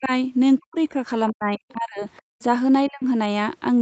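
Speech on a call, where the talker's own voice is repeatedly pulled down by speech suppressed in double talk, most likely caused by the echo canceller mistaking the talker for loudspeaker echo while the far side was also speaking and attenuating both. The dips fall at 0.0 to 0.11 s (about 15 dB), 0.59 to 0.96 s and 1.32 to 2.04 s (each about 40 dB deep), and 2.88 to 3.04 s (about 25 dB). What sets this apart from a simple level drop is that the voice itself sinks mid-phrase rather than the room tone. Inside the longest dip, from 1.54 to 1.72 s, and again briefly at 2.17 to 2.21 s, a second faint voice comes through. This is the other side's voice leaking through, with the likely cause being loudspeaker playback that the canceller failed to subtract fully. It sits roughly 30 dB and then 35 dB below the talker. It differs from suppression because it adds sound instead of removing it, and it differs from room reverberation because it is a separate voice with its own timing. 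Between 2.32 and 2.40 s there is background gated by the echo canceller. The room sound drops by about 38 dB for roughly 70 ms and snaps back as the canceller releases. Here the ambience vanishes rather than the speech, which is what separates it from double-talk suppression. Throughout, the top end stops at 8 kHz, which fits a wideband Opus call at around 24 kbps.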